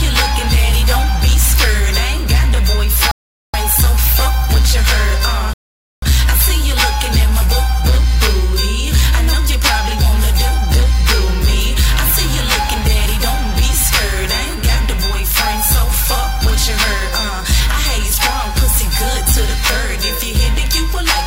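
The player ran short of downloaded audio twice and halted until more data arrived, causing a rebuffering stall at 3.11–3.54 s and again at 5.53–6.03 s. Each time the sound drops to silence, then picks up exactly where it stopped, adding 0.42 s and 0.49 s without losing anything.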